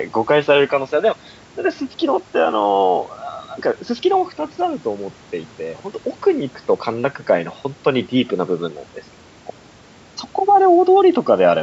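No technical faults are audible.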